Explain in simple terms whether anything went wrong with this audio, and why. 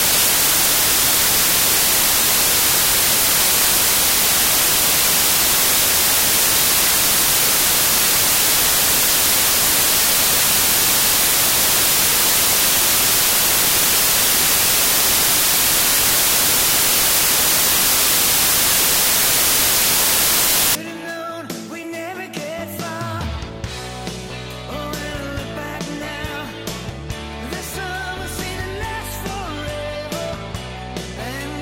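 From the start to about 20.75 s, the audio suffers from samples built from the wrong bytes. Each sample is stored as a few bytes, and here the player stitched them together incorrectly, either shifted by one byte or in reversed order. The tiny, rapidly changing details end up treated as the main part of each value, so what comes out is loud hiss-like noise.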